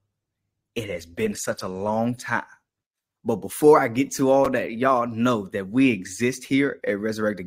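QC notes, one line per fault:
0.0–2.0 s, adaptive stream starting at a low bitrate: for the first two seconds the speech is dull and band-limited, with thin, smeared upper frequencies and stronger codec artefacts, then it steps abruptly to a fuller, cleaner sound with no dropout at the switch. The player opened on a cheap rendition to start fast and upgraded once it had measured throughput; the opening quality fits roughly 16 kbit/s Opus, and the later section fits roughly 64 kbit/s.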